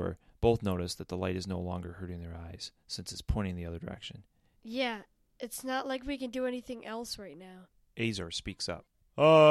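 No technical faults detected.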